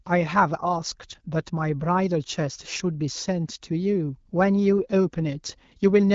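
No technical faults can be heard in this speech, which comes through an AMR wideband (HD Voice) codec at 12.65 kbit/s with nothing above about 7.5 kHz.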